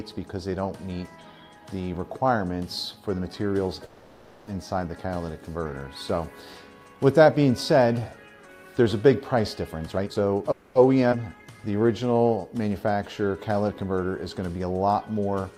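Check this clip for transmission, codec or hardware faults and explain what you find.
There are four kinds of network-side trouble here, all packet timing and buffering rather than codec or hardware faults. Apart from one freeze early on, they cluster in the later part of the clip.

Call audio freeze, at 3.85 to 4.50 s and again at 10.51 to 10.78 s. The first lasts about 0.62 s and the second about 0.24 s. In both, the last bit of sound is carried on as a fading buzz or hiss instead of dropping to silence. Then the audio picks up exactly where it left off, so nothing is lost; it just arrives later, by 620 ms and 240 ms respectively. The likely cause is packets held up in transit, which let the jitter buffer run dry while the receiver filled the gap.

Jitter buffer speed-up, from 9.90 to 10.48 s. The receiver was sitting on more audio than it wanted, so it trimmed out tiny pitch-period-sized slices over and over, roughly a third of a second in total. 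Playback runs at about 159% speed without any pitch shift, so that stretch sounds rushed and crammed together.

Skip ahead, at 11.11 to 11.15 s. Here a chunk of roughly a fifth of a second is simply dropped while later audio was already queued. The join has only about 10 ms of fill, so it sounds like a quick jump forward, with the two sides spliced almost directly and a small piece of the sound gone.

Jitter buffer slow-down, from 11.29 to 12.42 s. Right after the jump, the buffer was low or had just raised its target delay, so the receiver repeated single pitch periods and bits of pauses to rebuild a reserve, adding 174 ms. Playback drops to about 85% speed at unchanged pitch, so sounds come out drawn-out and slightly sluggish, possibly with a faint warble.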